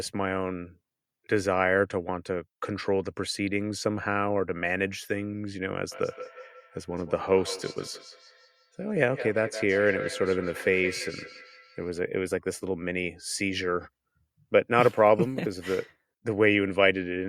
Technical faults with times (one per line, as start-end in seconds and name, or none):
5.91-11.92 feedback echo between two devices